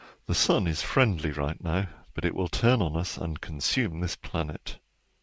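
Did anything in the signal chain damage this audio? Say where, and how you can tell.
No, nothing in the chain has damaged this speech; it just carries the ordinary character of a wideband call path, with nothing above 8 kHz, which fits a G.722 link, and that's simply how such a call sounds.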